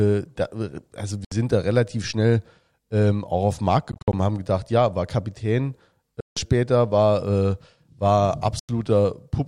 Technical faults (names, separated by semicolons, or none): Bluetooth dropout